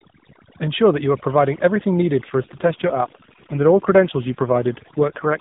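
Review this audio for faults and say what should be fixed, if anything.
Overdone noise removal runs through the whole clip. The suppressor was pushed so hard that any frequency band sitting near its noise estimate is pulled far down or switched off, and the quieter parts of the speech go with it. The background drops to near silence broken by twinkling specks. On a spectrogram the gaps between syllables are almost empty except for scattered isolated dots, and the harmonics show ragged holes. Prevention: use a gentler reduction amount with a floor so bands are attenuated rather than removed.

An AMR rate drop begins at about 2.24 s, right after "providing everything needed", and lasts until about 5.37 s. The bandwidth stays the same and nothing drops out. The speech simply becomes rougher, buzzier and more synthetic, which points to the network stepping the codec down from 12.2 to 5.9 kbps to spend more bits on error protection. 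The narrowband AMR codec itself still cuts everything above 4 kHz. On a spectrogram the harmonics past 2.24 s look smeared and less defined under the same 4 kHz ceiling, and the waveform keeps its level but loses fine detail. Prevention: improve link quality or coverage so the codec can hold its higher rate.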